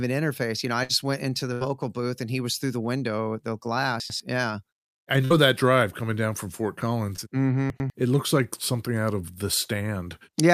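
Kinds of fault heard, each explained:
Burst of packet loss: Three runs of speech went missing, about 60 ms at 0.83 s, 80 ms at 1.53 s and 60 ms at 5.25 s. Each gap is bridged by extending the preceding sound while fading it, giving a brief held buzz or hiss, then speech resumes with that stretch gone.
Chunks out of order: Twice, at 4.0 to 4.2 s and 7.7 to 7.9 s, a 100 ms block of speech plays one block late, swapped with the block that should follow it. No audio is lost, but the reversed order and hard joins produce a jumbled moment.
Short concealed packet loss: Around 7.16 to 7.25 s, about 20 ms of speech failed to arrive in time and was patched by continuing the previous sound before blending back. It is heard as a brief smear or wobble, a tiny stretch of roughly ten milliseconds.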